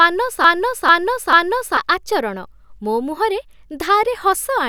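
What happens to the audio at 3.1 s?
Nothing happens to the audio at 3.1 s; the speech is intact there, with no dropout, click, distortion or other fault.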